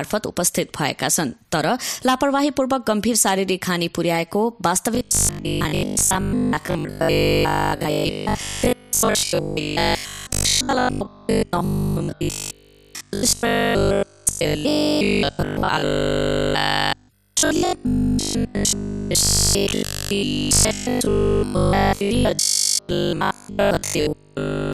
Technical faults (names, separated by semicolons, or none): robotic sound from repeated short buffers